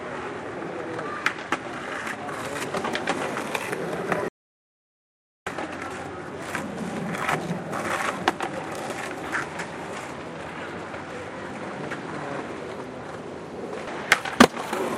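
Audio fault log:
4.28 to 5.47 s, audio dropout to silence: the sound cuts off abruptly and returns just as suddenly, leaving a gap of about 1.18 s that is completely silent, with no background or room tone underneath. Whatever occurred in that stretch is missing. The likely cause is a momentary loss of the input signal, such as a disconnected device, a failed link or an accidental mute, while recording continued and filled the gap with silence.
5.90 to 5.94 s and 13.87 to 13.90 s, damaged data in a compressed stream: at each point a brief disturbance of about 30 ms breaks into the sound, heard as a chirp, squawk, click or short hole. Corrupted bytes in the compressed data make the decoder misread or reject those frames. It loses sync and has to search for the next valid frame header before normal playback can resume.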